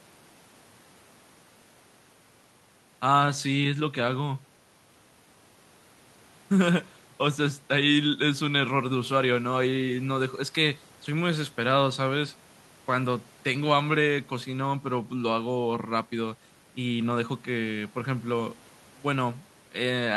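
No technical fault can be heard anywhere in this speech recording, and the signal holds steady with nothing that calls for a time or a cause.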